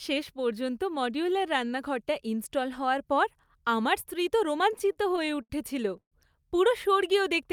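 From 4.73 to 5.52 s the speech goes into repeated stalls, a stutter. Ten short hitches bunch together, the longest about 72 ms, and together they pad out roughly 180 ms, nearly a quarter of that stretch. Each time the jitter buffer ran dry, the receiver stretched the last bit of sound to cover the wait. Nothing actually drops out, but the delivery drags and judders.

Then at 6.00 s there's a call audio freeze lasting until 6.14 s. The sound hangs and fades, and most of that 119 ms gap, about 90 ms, sits in outright silence before the speech resumes exactly where it left off. Nothing is lost. It's simply pushed later. The likely cause is packets getting held up in transit, which emptied the buffer and left the receiver filling time until they turned up.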